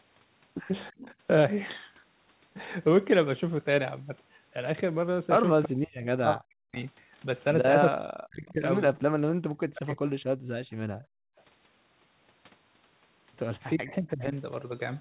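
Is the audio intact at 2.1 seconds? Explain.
Yes, the speech at 2.1 seconds is intact, with no dropout, glitch or other fault at that moment.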